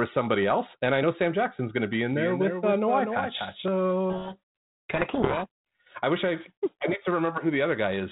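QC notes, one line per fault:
2.13–3.65 s, doubled audio track: a dry full-band copy about 5 dB quieter trails by roughly 300 ms and cuts in and out abruptly, likely from a slower second capture path.
4.10–5.47 s, codec payload misread: the decoder reads the G.726 code words in the wrong bit order, so its difference values are wrong and the speech is buried in harsh distortion.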